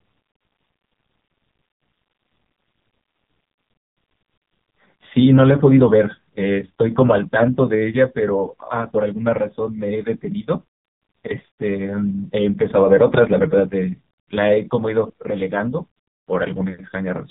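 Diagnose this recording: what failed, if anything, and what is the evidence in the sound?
The failure is at the codec stage. The whole recording has passed through the AMR narrowband mobile codec, the AMR-NB speech codec of 2G and 3G phones. Nothing above 3.7 kHz survives, so sibilants and breath sound dull and boxed in. The speech is heavily damaged throughout. It sounds buzzy and synthetic. That fits the lowest mode, around 4.75 kbps. At that rate each 20 ms frame keeps only a crude vocal-tract filter and a few excitation pulses.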